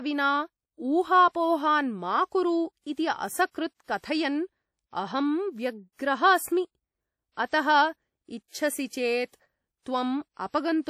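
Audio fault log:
Throughout, WMA compression: the speech carries a ringing, washy quality, with a hiss that rises and falls with the level of the signal rather than sitting steady underneath it. This is likely a transform codec with long blocks, smearing its quantisation noise over tens of milliseconds and zeroing weaker spectral lines. The damage is plainly audible, which fits a bitrate around 48 kbps, though the band still extends to about 20.1 kHz.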